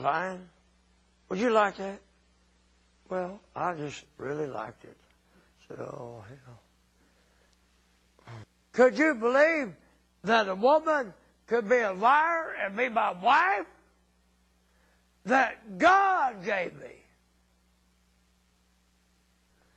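From 0.0 to 4.0 s the adaptive stream starts at a low bitrate: nothing is present above 11.3 kHz and codec artefacts are heavy, which fits roughly 32 kbit/s MP3. At 4.0 s the quality steps up abruptly without a gap, consistent with 128 kbit/s.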